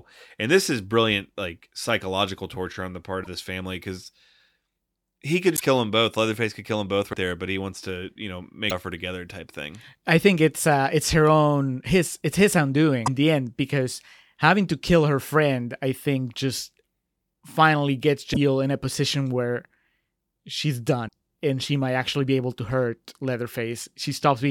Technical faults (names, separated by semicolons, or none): broken MP3 bit reservoir